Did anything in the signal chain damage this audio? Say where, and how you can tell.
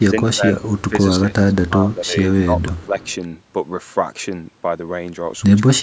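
Yes. The damage is in the call processing. Speech suppressed in double talk shows up from 0.0 to 0.63 s, 0.79 to 0.94 s, 1.17 to 2.98 s and 5.71 to 5.82 s. The level dips by roughly 15 dB, about 10 dB in the short stretch, and close to 25 dB at the very end. The likely cause is an echo canceller that could not tell this talker from loudspeaker echo while both sides spoke, so it turned everything down. On a waveform the envelope sags or breaks into pieces, and a spectrogram shows the upper bands thinning or blanking in patches.

An echo leak appears at 0.67 to 0.82 s and again at 2.78 to 3.14 s. A faint copy of the sound trails the original by 255 ms, about 30 dB below the speech. It is most likely a loudspeaker on one side whose canceller left residue that was sent back. On a spectrogram it looks like a weak duplicate of the preceding harmonic pattern, shifted a quarter second to the right. 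In the waveform it is a low-level ripple under the gaps.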